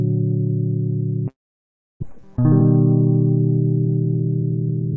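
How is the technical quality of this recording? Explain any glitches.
The music has two audible faults: a gap in the first half and a hurried passage at the end. The band stops at 8 kHz, which fits the G.722 wideband codec at 64 kbps carrying the call.

From 1.28 s to 2.04 s the sound breaks off. The last moment of music is stretched into a fading buzz, followed by well over half a second of near silence. Playback resumes with roughly 400 ms of material simply absent. This is most likely a long network dropout: packets stopped arriving, the receiver's concealment extended the final frames until it had nothing plausible left to synthesise, and the stream picked up again further along, skipping what was lost.

From 3.87 s to the end, the music runs about 10% fast without any change in pitch. This is a jitter buffer speed-up. Delayed packets arrived in a batch and left the buffer deeper than its target. 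To shed that delay, the receiver repeatedly cut out short pitch-period slices, removing around a tenth of a second in total. The pulse tightens and the tempo loses its steadiness.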